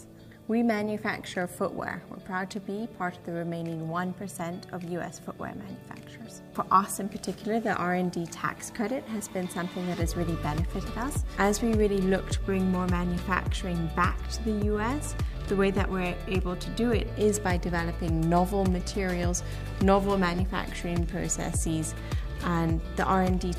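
Computer activity noise starts at 21.17 s and runs to the end. It is a faint buzzing chirp near 300 Hz, roughly 35 dB below the sound, from computer load changes disturbing the shared audio ground.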